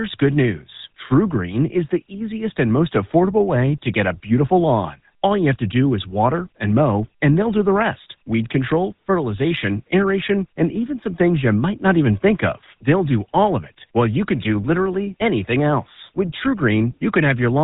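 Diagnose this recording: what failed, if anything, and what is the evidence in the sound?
The codec stage is at fault, and it's a GSM full-rate codec across the whole speech clip. Nothing gets through above 4 kHz, and there's an obvious buzzy, gravelly roughness, because the coder rebuilds speech from a vocal-tract model driven by sparse pulses. That fits a 13 kbps stream.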